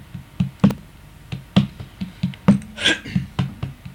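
A short burst of processor overload crackle runs from about 0.71 to 0.89 s: a gritty tearing laid over the sound, made of several hard-edged glitches in quick succession where the processor missed deadlines for buffers of only a few milliseconds and replayed stale audio instead of leaving silence. Unlike a single dropout or a level-driven clipping buzz, it is a cluster of tiny repeats that stops as soon as the load passes.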